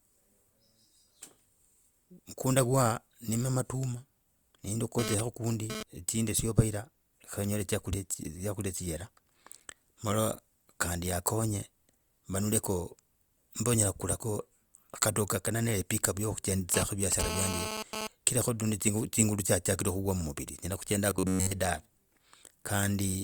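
GSM phone buzz appears from 4.99 to 5.83 s and again from 16.74 to 18.07 s. A nearby 2G phone sending data transmits in radio bursts about 217 times a second, and the audio circuitry rectifies those pulses into sound. The result is a hard, raspy buzz at 217 Hz, rich in harmonics and unrelated to the speech, sitting about 5 dB below the speech. It arrives in two separate stretches, as data traffic does.

Robotic sound from repeated short buffers occurs from 21.11 to 21.51 s. The speech turns into a rigid, metallic buzz at 93.8 Hz that follows the original only loosely. The likely cause is new audio arriving too seldom, so the playback software repeats the last short block while real audio is skipped. Repeated material fills most of the span, and the buzz rate points to a block of about 10.7 ms.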